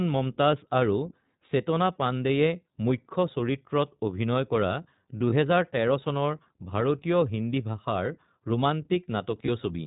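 Throughout, the speech carries the iLBC codec's narrowband sound: nothing above 4 kHz, and a plainly audible rough, slightly synthetic edge. Its even texture, which fits the 15.2 kbps mode with 20 ms frames, differs from a lowpass filter because the grain is in the excitation itself, not just the missing top end.

From 5.30 to 5.33 s, and again from 9.46 to 9.49 s, a lost iLBC frame leaves a brief held, faintly buzzy vowel sound lasting about 20 ms where the decoder repeats the last pitch cycle with noise. Unlike a dropout, there is no silent gap, and the speech is clean again almost at once.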